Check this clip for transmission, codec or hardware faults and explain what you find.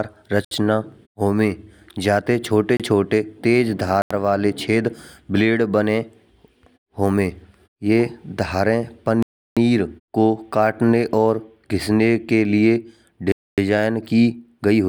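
The speech drops out abruptly five times, each a block of digital silence: 0.45 to 0.51 s (66 ms), 2.77 to 2.80 s (28 ms) after "होवे जाते छोटे", 4.02 to 4.11 s (85 ms), 9.23 to 9.57 s (341 ms) before "को कटने", and 13.32 to 13.58 s (256 ms) after "घिसने के लिए". Each cuts into silence and back out with no fade. The 28 ms gap is close to a tick, while the 256 and 341 ms gaps are clear holes in the speech. Samples were replaced by zeros with no fade at either edge, most plausibly because an output buffer wasn't filled in time. The 85 ms and 341 ms lengths fit whole blocks of 4096 and 16384 samples.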